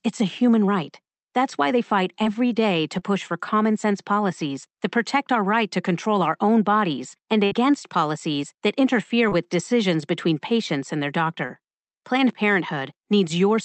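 At 2.23 s, after "why they fight", and at 2.99 s, after "day to", short concealed packet loss occurs: about 20 ms of audio failed to arrive, and the receiver extended the preceding sound, leaving a brief smear.

At 7.45 to 7.53 s, a burst of packet loss removes about 60 ms after "our own bodies and". The concealment carries the last sound on as a fading buzz or hiss before "policies that interfere" resumes.

The same short concealed packet loss recurs at 9.29 s and 11.47 s, each a momentary wobble where roughly 20 ms was patched over.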